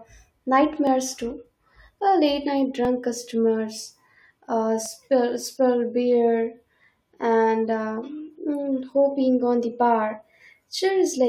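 At 0.87, 2.85 (between "late night" and "customers uh"), 4.86 (before "spill beer"), 6.84 to 6.86 (before "and uh") and 8.83 s, the speech skips, repeating about every 2 s. This is overlap between stream segments: adjoining 2-second segments overlap in time, and trimming that overlap removes about 6 to 20 milliseconds of real audio. On a waveform each shows as an abrupt discontinuity; a spectrogram shows thin vertical broadband lines.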